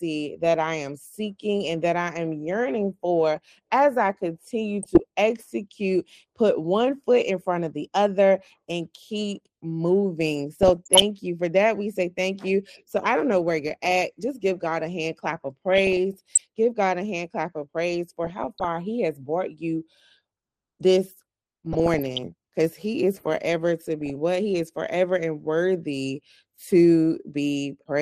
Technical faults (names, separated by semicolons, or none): MP2 compression; DAB burbling